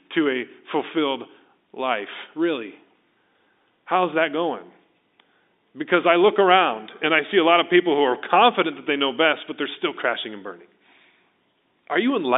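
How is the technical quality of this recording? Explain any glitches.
No glitches can be heard: the speech comes through a standard G.711 telephone line, with the narrow band of roughly 250 Hz to 3.7 kHz that such a line passes, and nothing breaks or disturbs the signal at any point.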